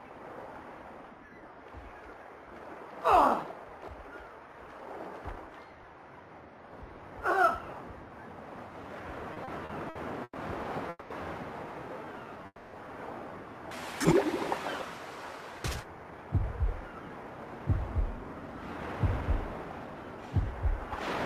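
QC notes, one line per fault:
9.33–10.37 s, repeated stalls (stutter): the audio halts five times in about a second, with the longest halt 120 ms and 280 ms of continued sound filling the gaps, about 27% of the span. Nothing is lost; late packets kept emptying the jitter buffer, so the receiver stretched the last sound each time. What sets it apart from a single freeze is the rapid, broken stop-start rhythm rather than one held gap.
10.89–11.12 s, call audio freeze: one continuous hold of 210 ms, where the last sound carries on and fades, and drops to silence for about its final 30 ms before the audio resumes exactly where it stopped. This is likely a single run of delayed packets draining the jitter buffer. It differs from the stutter before it by being one gap, and it pushes everything after it 210 ms later.
12.05–12.44 s, jitter buffer slow-down: for about 0.4 s the audio runs at 88% speed while keeping its pitch, with 55 ms added by repeating single pitch periods and bits of pause to rebuild the buffer's reserve. 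Unlike a freeze, nothing stops; sounds are simply drawn out. It comes right before the next hold.
12.46–12.75 s, call audio freeze: a second single hold of 270 ms, the last sound continued and fading to silence for about its final 40 ms, then resuming without loss. The sound points to packets stalled in transit. It is longer than the first freeze and adds 270 ms of delay, and like it, it is one clean break rather than the slow-down's stretching or the stutter's repeated catches.
15.52–19.95 s, jitter buffer speed-up: across about 4.4 s the audio runs at 110% speed at unchanged pitch, as short pieces of one or a few pitch periods are cut again and again, roughly 0.4 s in total, to bring an overfull buffer back to target. It sounds hurried and compressed, the opposite of the slow-down, and without any gaps or stops.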